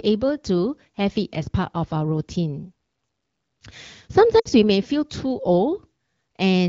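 Speech coded as AMR wideband (HD Voice), sounding like a rate of 12.65 kbit/s or so with only light codec roughness, has a short patch of lost AMR speech frames from 4.39 to 4.49 s, right before "we may feel too". The decoder had no good data there, so it stretched the last pitch and vocal tract shape with falling gain. That's the brief smeared, fading dip you hear, and its length fits roughly three 20 ms frames dropped over the radio link.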